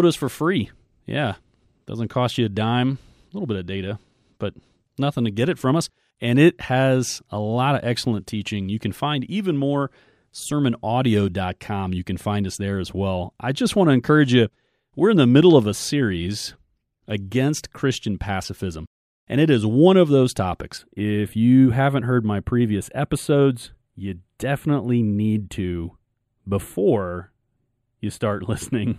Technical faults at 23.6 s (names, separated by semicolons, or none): channel delay (comb filtering)